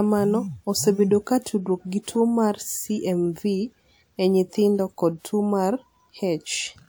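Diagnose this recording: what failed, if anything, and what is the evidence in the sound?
Pre-echo at 2.03 to 2.08 s, a codec fault: a hiss runs for about 49 ms ahead of a sharp speech onset, which sounds softened. The transform block spread quantisation noise scaled to the attack across the quiet stretch preceding it.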